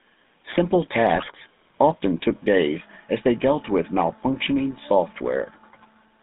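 Throughout, the GSM full-rate codec gives the speech a buzzy, gravelly roughness. On a spectrogram, energy sits between 200 Hz and 3.7 kHz with coarse pulse-like striations.

From 1.14 to 1.27 s, GSM bit errors corrupt the decoder's filter and gain values, causing squawks and pops. The waveform shows sudden level spikes and distorted spectral frames.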